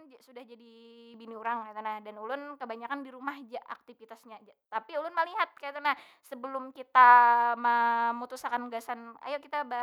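At 1.14 s the microphone volume steps up. The level jumps by about 7 dB in a single instant, with no fade. The call software judged the microphone too quiet and raised the device's input volume in one move. Because the change happens at the input, everything rises together. The speech and the background noise both get louder at the same moment. The step is heard as a sudden, uniform lift in loudness.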